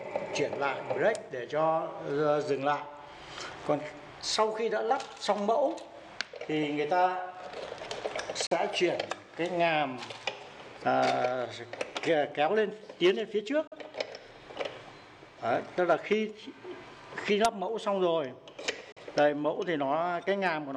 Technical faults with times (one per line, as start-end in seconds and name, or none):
8.47-8.57 digital broadcast dropout
13.67-13.76 digital broadcast dropout
18.92-19.01 digital broadcast dropout